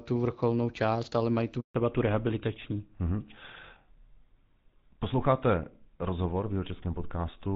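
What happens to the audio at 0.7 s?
Nothing goes wrong at 0.7 s; the speech passes through the AMR wideband (HD Voice) codec intact there, with no dropout, click or other fault at that moment.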